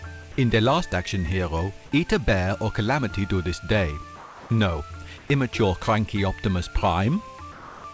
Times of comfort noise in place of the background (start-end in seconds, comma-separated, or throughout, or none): 4.16-4.50, 5.18-5.30, 7.52-7.84